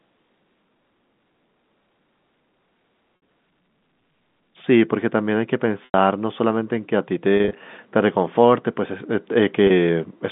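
At 3.16 to 3.22 s, 5.85 to 5.94 s, 7.37 to 7.53 s and 9.67 to 9.70 s the speech shows packet loss with pitch repetition. The receiver fills each gap by looping the last pitch period, fading it over about 50 ms, so the 60 ms and 90 ms losses sound like a held, buzzy syllable that thins out. At 7.37 s, 110 ms of loss is scattered across 160 ms in runs of at most 30 ms, giving short, slightly held, buzzy notes. The 30 ms gap at 9.67 s is a brief hum. The gap lengths fit 10 ms packets, and the narrow telephone band of the G.711 coding stays audible throughout.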